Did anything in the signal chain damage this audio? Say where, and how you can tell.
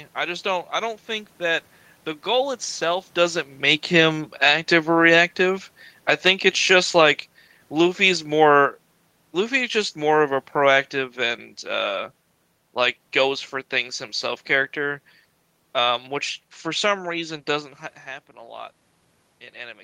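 Yes. Automatic gain falling, 2.27 to 16.98 s, in call processing: the control judged the input too loud or its background noise too strong and eased gain down about 10 dB, room noise sinking with it.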